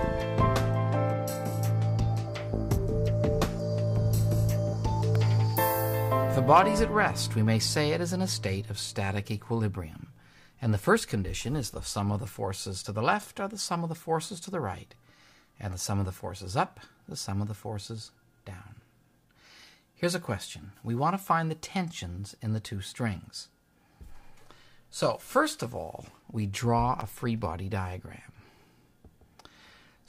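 A sharp snap at 5.15 s, with a quieter one at 27.01 s, rides on top of the sound: an electrical switching spike, likely a nearby switch arcing into the audio line.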